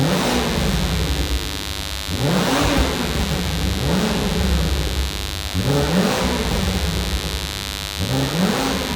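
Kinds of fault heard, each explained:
Mains buzz: a steady, raspy buzz built on 50 Hz and its harmonics, running the whole clip about 10 dB below the sound itself. Its sharp, spiky edge and energy reaching up into the kilohertz range set it apart from smooth, low mains hum.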